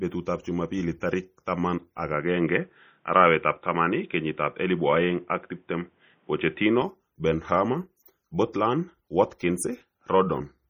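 Throughout the speech, heavy MP3 compression is audible as a watery, swirling texture, which fits a low bitrate near 32 kbps. Nothing remains above 20.7 kHz.

At 1.00 s, just before "tarik taman ak", a short pre-echo lasting 13 ms puts hiss ahead of an attack and softens it.

From 2.14 s to 6.82 s, the sound turns dull, likely from an input switched to a poorer device. Nothing passes above 3.8 kHz. A new noise floor sits about 40 dB below the signal. There is no gap and no level change.

Pre-echo returns at 8.05 s and 9.39 s, smearing each attack with brief hiss of 11 ms and 17 ms.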